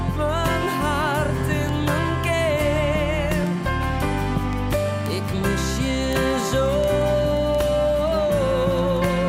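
Word clock ticks run through the audio from 0.27 s to 9.14 s: sharp, uneven clicks at a steady rate of about five per second, around fifty in all. The receiving device is clocked independently of the sender, which points to a clock mismatch of roughly 100 ppm, so every time the two clocks slip, a single sample is dropped or repeated. On a spectrogram these show as thin, evenly spaced broadband vertical lines. In the waveform each is a one-sample step or spike.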